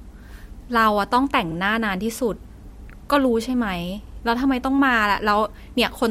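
Speech with overlapping chunks: at 1.52 to 1.57 s and again at 4.07 to 4.12 s, a 50 ms slice plays twice, giving a brief stutter at each join. The spacing fits 2.5 s chunks, each starting 50 ms before the previous one finished. Unlike a dropout, nothing goes missing or silent. The sound repeats instead, and the regular spacing separates it from random packet glitches.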